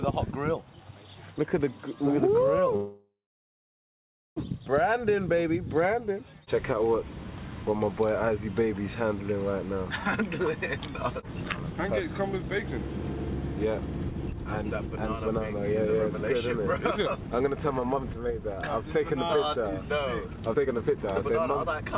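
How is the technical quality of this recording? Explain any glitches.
The recording has two clear glitches: one stall early on and two stretches where the sound runs fast. Nothing comes through above 4 kHz, and the coding noise is consistent with a G.711 mu-law call codec at 64 kbps.

From 2.76 to 4.38 s there is a call audio freeze. The last sound carries on briefly as a fading buzz, then drops to silence for about 1.2 s before resuming exactly where it left off. Nothing is lost, but the gap adds roughly 1.6 s of delay. The likely cause is that packets were held up in transit and the jitter buffer ran dry, so the receiver padded the wait until they arrived.

The jitter buffer speed-up happens twice. From 10.21 to 12.23 s the pace rises to 103 %, trimming roughly 70 ms, which is barely noticeable. From 13.65 to 21.91 s it runs at 111 % and removes about a second, so the sound is audibly hurried while the pitch stays unchanged. 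This happens when the buffer holds more audio than its target, typically after the delayed packets arrive in a burst. The receiver then cuts out many short pitch-period slices to bring the delay back down.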